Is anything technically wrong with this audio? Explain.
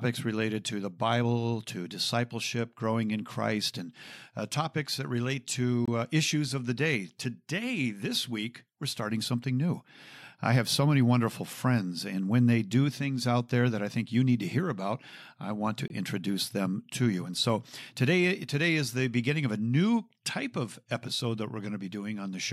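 Yes. There is a gap between chunks at 5.86 to 5.88 s and again at 15.88 to 15.90 s. The speech is split into 10-second blocks, and about 23 ms of silence is inserted at each join. These short holes recur at that exact spacing, and no speech goes missing, unlike a dropout.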